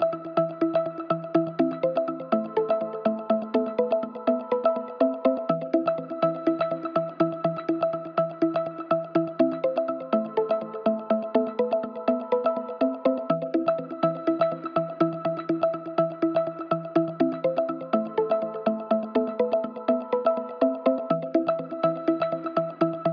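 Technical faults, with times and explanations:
No technical faults can be heard anywhere in this audio.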